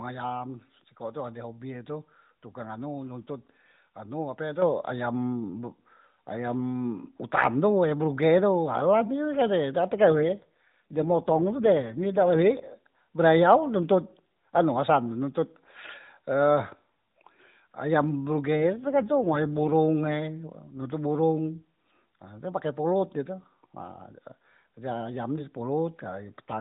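A speech clip carried over AMR narrowband, with nothing above 4 kHz. At 4.62 s, between "nontot anu ape" and "ayam be", the microphone volume steps up. Voice and background rise together by about 7 dB in one jump, as software raised the input gain mid-phrase. From 9.96 to 12.75 s and from 18.56 to 19.76 s, an AMR rate drop makes the voice rougher and more synthetic. The band stays the same and there is no gap. The sound points to a fall from 12.2 to 5.9 kbps, with bits moved to error protection on a weak link.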